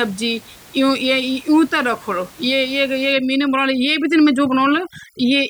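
From 3.12 s to the end of the clip, overdone noise removal takes hold: a noise reduction stage set too aggressively pulls individual frequency bands down or out whenever they sit near its noise estimate, and the softer parts of the speech vanish along with the room noise, which before this point sits about 26 dB under the speech. The gaps fall to near silence dotted with twinkling, chirpy specks. The isolated tonal specks and their warbling quality set it apart from a plain gate or dropout, which would cut everything at once.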